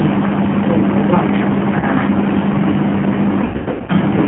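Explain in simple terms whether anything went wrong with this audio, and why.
Yes, two things went wrong. The speech passed through a G.729 codec, a heavy phone-call compressor that rebuilds the voice from a rough model instead of sending it as it was. Everything above about 3.4 kHz is gone, so the voice sounds narrow, slightly rough and artificial.

Parts of the call also went missing in transit, which is VoIP packet loss concealed by the speech codec. When data failed to arrive, the decoder guessed by stretching the last bit of voice it had. A single 20 ms gap hit at 1.80 to 1.87 s. A much worse stretch ran from 3.44 to 3.92 s, with about 340 ms lost in pieces up to 100 ms long. There the voice is stretched into a buzzy tone or a coloured noise that fades, and stays weak or distorted for a while even after the data returns.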